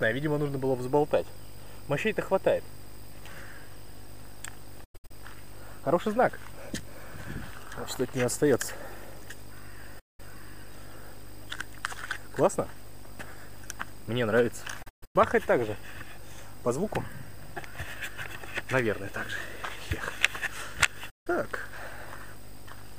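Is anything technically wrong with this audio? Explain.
Yes, there's a digital broadcast dropout, four times: 4.84 to 5.11 s, 9.99 to 10.20 s, 14.82 to 15.16 s, and 21.10 to 21.27 s. The receiver lost frames and muted until clean ones came back, fading out and in over about 8 ms each time. The first and third go silent in several short holes (longest 96 and 128 ms); the other two are single gaps. About 160 to 256 ms of audio vanishes per event, which points to roughly five to eight lost frames.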